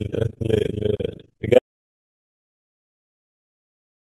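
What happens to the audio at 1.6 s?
An audio dropout to silence begins at 1.58 s and lasts to the end of the clip. The speech stops abruptly mid-flow and gives way to silence with no room tone. The likely cause is a lost input, such as a disconnected device or failed link, while recording continued.

Up to that cut, overlap-add ripple is present. Frames were rejoined with an overlap that doesn't sum to constant gain, so the level swings by about 60 dB around 30 times a second. This produces a rough tremolo on the speech.

MP3 compression damage is also plainly audible before the dropout: a watery, swirly texture and smeared attacks. This is likely from encoding at a low bitrate around 64 kbps, where weak frequency lines switch on and off between frames.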